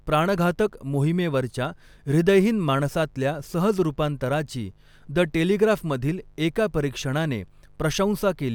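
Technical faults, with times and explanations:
Throughout, mains buzz: a steady, raspy buzz sits under the speech, about 35 dB below the signal. Sharp switching spikes from the 50 Hz supply leak into the signal twice per cycle. That spiky waveform spreads harmonics from 50 Hz up into the kilohertz range, giving the rasp.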